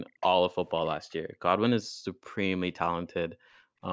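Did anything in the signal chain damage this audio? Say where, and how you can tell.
Yes, in call processing: the background is gated by the echo canceller, ducking the room sound about 33–40 dB at 0.06–0.2, 1.23–1.42, 1.9–2.35 and 3.29–3.81 s.

At 0.2–0.27 s a faint copy about 468 ms late, roughly 10 dB under the speech, slips through, likely an echo leak from loudspeaker pickup.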